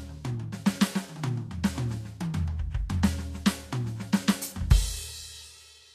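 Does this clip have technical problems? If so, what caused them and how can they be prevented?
Yes. Likely Vorbis compression at a low bitrate, around 36 kbps, removed everything above 14.1 kHz throughout and replaced treble detail with grainy hiss. Encoding at a higher quality setting would prevent this.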